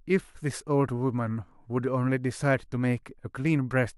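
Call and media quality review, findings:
Call and media quality review findings: no faults heard in this speech clip.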